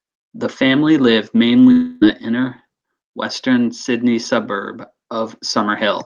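From 1.71 to 2.03 s, just after "family lived", about 0.3 s of speech is lost, most likely to a long network dropout. The receiver fills the whole gap with a buzzy, smeared continuation of the last sound. No silence is left before the speech resumes at "inner western". On a spectrogram the harmonics freeze into blurred, repeating bands. In the waveform that stretch has an unbroken, evenly decaying envelope.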